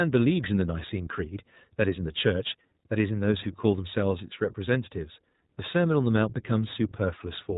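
Throughout, iLBC codec damage cuts everything above 4 kHz and adds a rough, synthetic grain from coding each frame independently, unlike simple muffling; this fits a 15.2 kbps, 20 ms mode.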